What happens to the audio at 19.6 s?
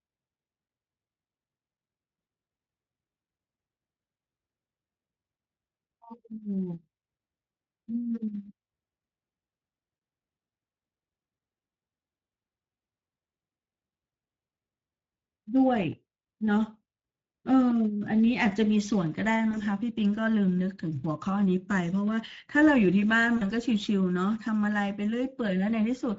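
A speech packet, apparently a single 20 ms frame, went missing, and the decoder filled the gap with VoIP packet loss concealment. From 19.51 to 19.63 s it extrapolates the last pitch and filter, so the voice smears into a buzzy tone or coloured noise that fades, and stays weak briefly after audio resumes. Underneath, the Speex codec, running at about 16.8 kbps, starves the excitation of bits, leaving the speech plainly hoarse and noisy.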